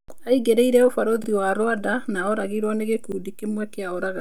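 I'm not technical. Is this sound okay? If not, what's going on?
No. At 1.24 s and again at 3.12 s the speech briefly stutters, like a tiny skip. This is a repeated buffer: new audio arrived late, so the player played the same 40-millisecond piece twice, joined abruptly.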